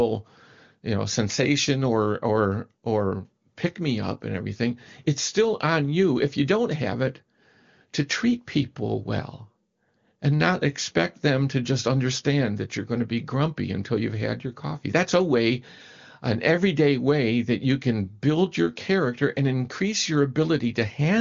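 No technical faults occur at any point in this speech, which comes through the AMR wideband (HD Voice) codec with its usual top end of about 7.2 kHz.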